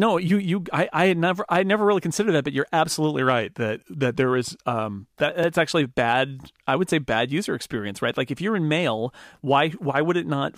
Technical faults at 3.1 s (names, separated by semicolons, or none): drift correction step